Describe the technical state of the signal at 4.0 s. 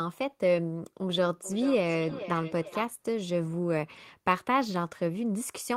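At 4.0 s the speech signal is intact, with no audible fault at that point.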